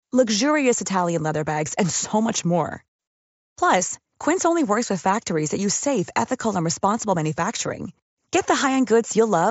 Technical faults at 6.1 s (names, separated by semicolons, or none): none